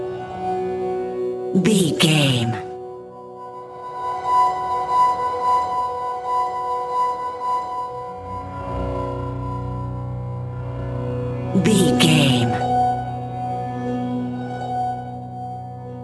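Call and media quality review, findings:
Aliasing, throughout the clip: gritty, metallic top end, with energy running hard up to an 11 kHz band edge. Probable component: sample-rate converter, fitting a drop to 22 kHz with no anti-alias filter. Content above 11 kHz folds back to unrelated frequencies, roughly 20 dB below signal.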